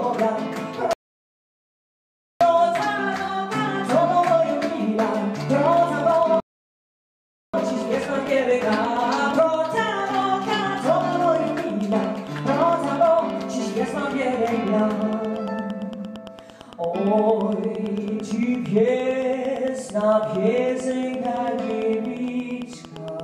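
At 0.93 s the audio drops to silence and sits there until 2.41 s, then picks up exactly where it left off. That's a rebuffering stall: the player ran dry of downloaded data and waited for more. Nothing goes missing, but about 1.48 s of dead air gets added.

From 5.66 s to 23.21 s there's a train of clicks, a steady tick at about 8.8 per second, around a hundred and fifty in all. Each click has the same shape, and they land at roughly the level of the sound itself, so they're heard even in the gaps. Evenly spaced, identical pulses like this are likely coming from electrical interference or an interface that's struggling.

Inside that click run, a second rebuffering stall cuts the audio from 6.40 s to 7.54 s, adding about 1.13 s before playback resumes seamlessly.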